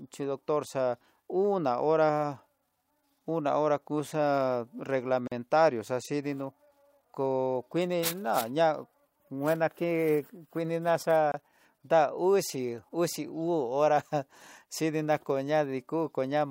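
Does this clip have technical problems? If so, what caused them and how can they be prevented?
Yes. Gaps at joins of encoded pieces at 5.27 to 5.32 s (about 42 ms) and 11.32 to 11.34 s (24 ms): separately encoded 6-second speech segments were joined with their encoder start delay and end padding left in. To prevent it, encode the speech as one continuous stream, or trim each segment's encoder delay and padding before joining.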